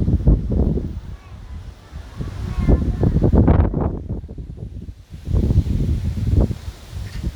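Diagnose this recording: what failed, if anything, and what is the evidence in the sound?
Nothing stood out on listening to this recording that would point to a failure at any stage of the chain.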